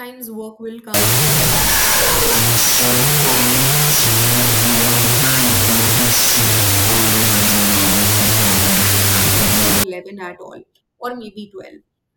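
Just after "work will", at 0.94 s, the speech collapses into loud broadband noise that lasts until 9.84 s. This is a wrong sample width fault. The pattern fits 32-bit float data being read as 16-bit integers. Each float gets split into two integer values. Only the high halves keep a trace of the real waveform, so the speech survives faintly under the noise, at half speed and roughly an octave low.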